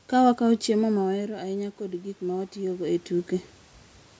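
Automatic gain rising runs from 1.01 to 3.03 s, just after "wakawo chiemo ma". The speech arriving at the microphone dropped by about 12 dB, so the gain control crept its gain up by about 4 dB over two seconds, swelling voice and room noise together.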